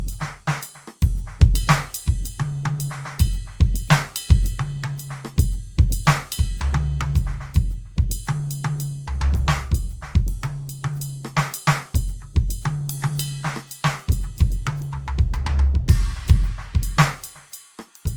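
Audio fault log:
throughout: generation loss. The music sounds swirly, smeared and hollow, attacks blur, and nothing sounds above 20.4 kHz. The likely cause is about three lossy re-encodes, consistent with Opus at 48 kbit/s. Each pass requantises on a shifted frame grid, stacking noise.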